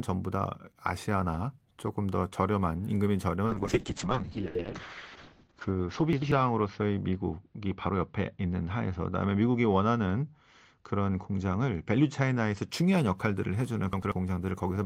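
Speech with a call bitrate drop from 3.46 s to 12.75 s: the encoder's rate falls from 32 kbps to 6 kbps, bottoming out for 1.71 s, and audio bandwidth shrinks from 20 kHz to 8 kHz, giving coarse, watery, muffled speech until the rate recovers. Chunks out of order occur at 4.46–4.64 s, 6.13–6.32 s and 13.93–14.12 s. Each time a 93 ms chunk plays one position late, swapping with its neighbour, so the sound jumbles briefly, with three hard joins.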